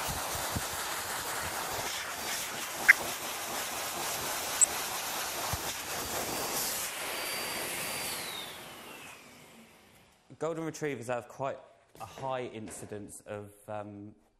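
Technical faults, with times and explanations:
Throughout: MP2 compression, likely at a low rate around 80 kbps; starved sub-bands drop out and coarse quantisation leaves the sound dull, gurgling and granular.
2.79–2.91 s and 4.57–4.64 s: DAB burbling; bit errors corrupt a few MP2 frames, putting short blips of noise into single sub-bands.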